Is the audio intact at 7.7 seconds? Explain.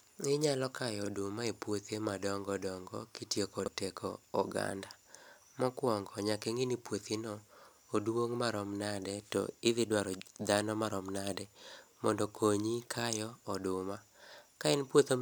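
Yes, at 7.7 seconds the speech plays through intact, with no dropout, click, distortion or other audible fault at that moment.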